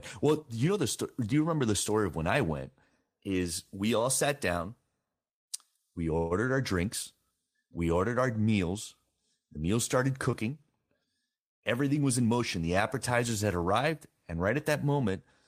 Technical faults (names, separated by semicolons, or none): call audio freeze; short concealed packet loss; jitter buffer speed-up